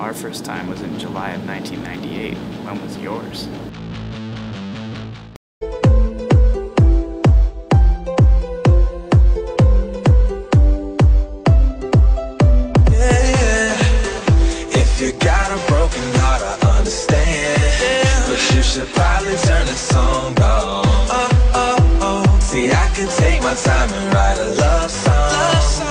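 Hard clipping runs through the whole clip. The signal is driven about 2 dB past what the stage can pass, so a small fraction of samples, around half a percent, are cut flat at the ceiling. The flattened peaks add high harmonics, heard as brief crackle on the loudest moments.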